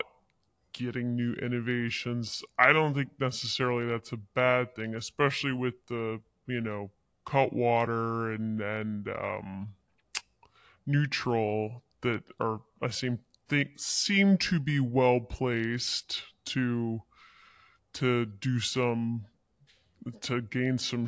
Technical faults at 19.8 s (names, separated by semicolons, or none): wrong sample rate